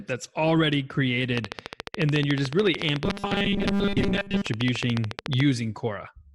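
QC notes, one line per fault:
1.38–5.41 s, train of clicks: right after "that's already" a steady ticking starts riding over the speech and keeps going through the gaps, at a regular 13.9 clicks per second, about fifty in all. They're sharp, same-shaped pops peaking about 15 dB above the speech itself, so they really stick out. A regular pulse like that is likely interference from nearby gear or a faulty connection or power supply.
3.04–4.46 s, robotic sound from repeated short buffers: the speech turns into a stiff metallic buzz pinned at 200 Hz, still loosely tracking the words. The buzz frequency fits a chunk of roughly 5 ms being looped, and most of the audio in this stretch, something like two-thirds or more, is repeats, with the real material skipped. That's likely audio arriving too rarely, with the software stuttering the last buffer to fill the gap.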